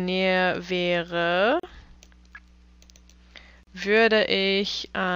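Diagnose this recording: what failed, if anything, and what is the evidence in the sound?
The codec stage is the culprit: a gap at a join of encoded pieces. Silence about 38 ms long cuts into continuous sound at 1.60–1.63 s and 3.63–3.67 s, every 2 s. Separately encoded chunks kept their encoder delay and last-frame padding when stitched together.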